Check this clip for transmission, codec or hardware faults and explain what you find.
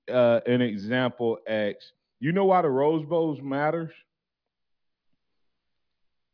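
Nothing in this speech recording points to a fault anywhere along its path. The sound stays steady throughout, with nothing unusual to report.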